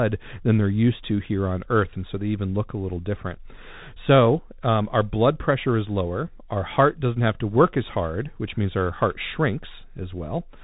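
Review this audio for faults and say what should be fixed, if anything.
Throughout, Bluetooth CVSD headset codec damage is plainly audible. Nothing passes above 3.8 kHz. One-bit up/down coding with an adapting step leaves granular hiss, scratchy s sounds and slope distortion on loud high sounds, which fits a 64 kbps CVSD link. Record through a wired microphone or a wideband headset mode instead.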